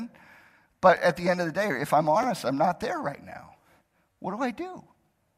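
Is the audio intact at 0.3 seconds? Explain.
Yes, at 0.3 seconds the audio is intact, with no dropout, click, distortion or other fault at that moment.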